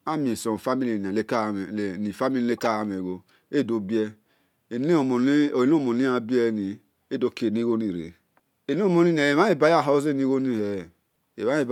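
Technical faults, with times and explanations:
2.58 to 2.63 s, corrupt frame decoded. A brief chirpy burst of noise cuts into the speech for about 60 ms, peaking around -20 dBFS. A few damaged compressed frames were decoded anyway. Their misread gains and codes put energy at the wrong frequencies.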